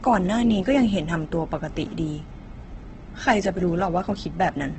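From start to finish the speech sounds rough and grainy, with a noisy, sandpapery texture where clean tones and harmonics should be, and nothing at all above 8.3 kHz, so the top end is dull and flat. This is heavy damage that is likely from Opus compression in its music-oriented mode. Short of bits, the encoder fills bands with noise or folded copies of lower bands and caps the bandwidth, which fits a rate near 12 kbps.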